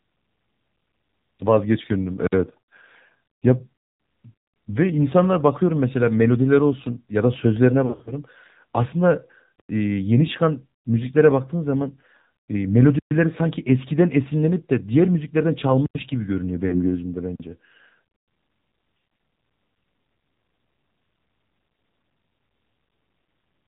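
Speech, and the whole clip has gone through the AMR narrowband mobile codec. Nothing above 4 kHz survives, so it sounds boxed-in and phone-like. The voice has that buzzy, synthetic edge you get when the vocal-tract model is fed very few pulses per subframe. The damage is plainly audible, which fits a low AMR-NB mode around 7.4 kbps. Between 7.86 and 8.12 s there's a patch of lost AMR speech frames. About 120 ms of audio is missing, scattered across roughly 200 ms, and the longest single gap is 40 ms. Each time a frame drops, the decoder carries the previous pitch and spectral shape forward at falling gain. You hear a stuttery warble and little dips rather than a clean gap, and it's a bit rough as it recovers. A second, shorter loss sits between 16.68 and 16.95 s, about 40 ms concealed, heard as a brief smeared wobble. Just after, from 17.36 to 17.40 s, there's a block of digital silence. 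It's a 40 ms hole where the output drops straight to silence and comes back with no fade. Unlike the frame losses, nothing is smoothed over here. The samples simply weren't written, most likely because the output buffer wasn't filled in time.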